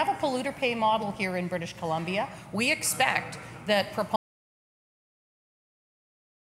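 At 4.16 s the sound cuts off into silence that lasts to the end: an audio dropout to silence, likely from lost input while recording continued.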